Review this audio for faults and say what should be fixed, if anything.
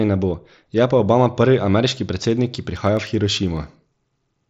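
Concealed Bluetooth headset packet loss at 0.99 s, just after "ne bo je": about 7.5 ms of audio, consistent with one lost frame, was refilled by repeating the best-matching stretch of the preceding waveform, so the gap is nearly hidden. Prevent it by keeping the headset close to the phone and away from 2.4 GHz interference.

Periodic USB or driver dropouts from 1.67 s to 3.67 s: roughly twenty tiny skips, each a fraction of a millisecond, recur every 0.1 s as evenly spaced ticks while sound is present. A background task is blocking the bus or driver at that interval. Prevent it by finding and stopping that background task or updating the audio driver.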